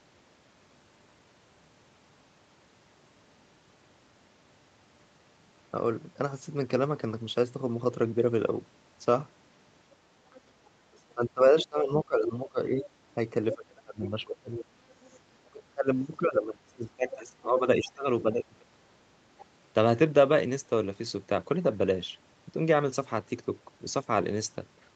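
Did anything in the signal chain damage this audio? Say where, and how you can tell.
Yes. The other side's voice leaking through occurs at 10.31–11.66, 12.85–15.2, 17.11–17.15 and 19.38–19.45 s, about 15 dB down (about 25 dB down at 19.38–19.45 s). Call processing likely left residual loudspeaker echo.

Speech suppressed in double talk runs from 10.86 to 19.2 s. The talker dips by up to about 25 dB. The echo canceller likely ducked both voices together.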